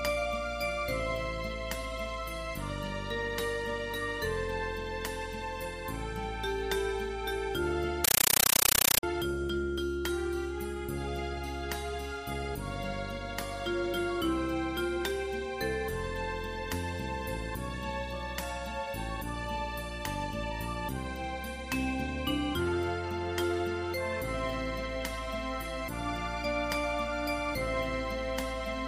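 From 8.04 s to 9.03 s the audio gives way to a compressed stream played as audio: very loud, harsh static chattering at 31.25 Hz, each burst about 9.3 ms long followed by roughly 23 ms of silence. That pattern matches AC-3 (Dolby Digital) frames sent over S/PDIF or HDMI and treated as ordinary PCM rather than decoded. The burst length points to a stream of around 448 kbps.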